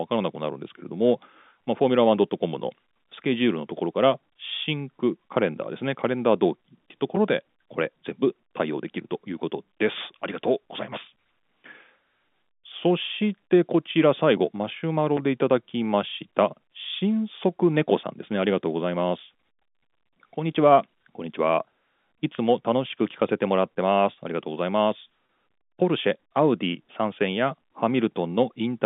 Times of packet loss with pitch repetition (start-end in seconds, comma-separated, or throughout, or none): 22.35-22.38, 25.26-25.29